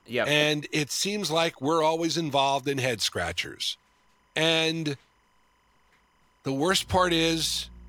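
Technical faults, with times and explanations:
Throughout, timecode bleed: linear timecode running at 25 frames per second leaks in from a neighbouring track or cable, its square wave flipping between roughly 1 and 2 kHz, so a faint chirping warble sits about 40 dB below the speech.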